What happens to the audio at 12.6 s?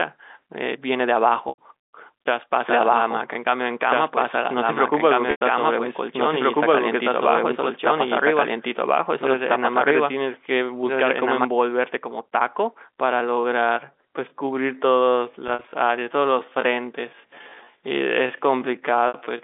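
Nothing goes wrong at 12.6 s: the audio is intact there, carrying only the narrow, telephone-band sound of the G.711 line it passes through.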